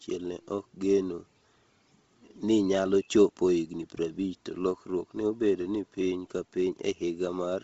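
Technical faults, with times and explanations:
Throughout, Bluetooth LC3 compression. The speech has nothing above 7.7 kHz, and the top of the band that remains sounds breathy and grainy. The codec damage is heavy. The likely cause is the LC3 codec of Bluetooth LE Audio, run at a low rate that fits about 24 kbps. With so few bits, it zeroes much of the upper spectrum and fills the gaps with noise. The short frames point to 7.5 ms frames.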